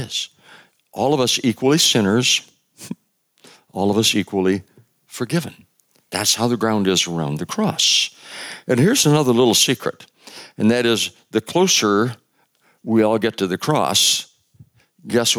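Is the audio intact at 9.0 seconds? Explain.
No. At 9.04 s the waveform's zero line jumps in a DC step and then decays away through a 20 Hz high-pass, producing a brief low thump just before "another little secret and." Gain pumping is also present at that moment, likely from input gain set far too high with a fast limiter pulling it down, so the gain swings by roughly 10 dB.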